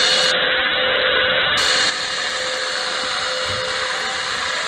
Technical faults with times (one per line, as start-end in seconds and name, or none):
0.34-1.69 call bitrate drop
1.90-4.68 sudden gain jump